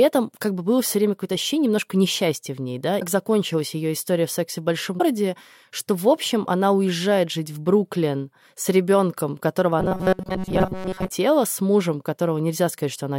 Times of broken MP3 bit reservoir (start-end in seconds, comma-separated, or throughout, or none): 2.99-3.02, 4.98-5.01, 10.28-10.31